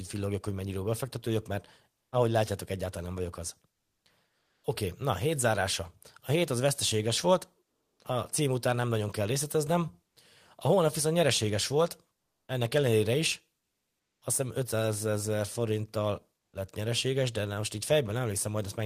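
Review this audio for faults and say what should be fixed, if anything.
Comfort noise in place of the background at 4.39–4.63 s, at 7.65–7.99 s (after "hét az veszteséges volt", before "a cím után nem") and at 12.15–12.47 s (before "ennek ellenére"). In each pause of 240 to 340 ms, the faint real background, about 50 to 62 dB below the loudest speech, gives way to a flat synthetic hiss. The level shifts by about 2 dB, 11 dB and 1 dB, the middle gap shifting most. The likely cause is Opus discontinuous transmission, which stops sending audio in these pauses, so the receiver fills them with generated noise. To prevent it, disable DTX on the sending encoder.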